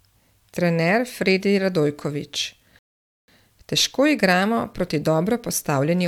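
At 2.79 s the speech hits a rebuffering stall: the player runs dry, sits silent until 3.28 s, then picks up exactly where it stopped, adding about half a second.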